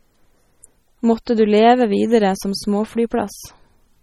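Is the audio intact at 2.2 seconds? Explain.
No, at 2.2 seconds the speech carries heavy, watery MP3 compression damage, likely from a low bitrate near 32 kbps; a spectrogram shows nothing above 16.8 kHz and flickering holes.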